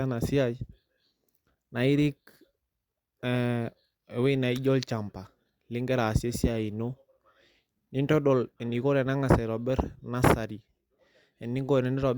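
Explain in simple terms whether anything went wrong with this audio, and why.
Nothing went wrong; no faults can be heard anywhere.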